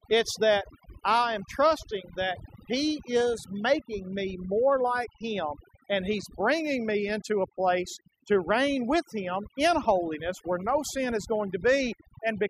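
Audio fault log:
Throughout, overdone noise removal: a noise reduction process set too aggressively pulls individual frequency bands far down, or out entirely, whenever their level sits close to its estimate of the background noise. The background falls away and what remains breaks into twinkling, warbling specks that flicker in and out band by band, and quieter parts of the speech are removed along with it. Unlike a noise gate, which silences the whole signal at once, this works frequency by frequency.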